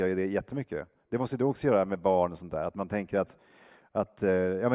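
Nothing in the speech recording stood out as a fault on listening.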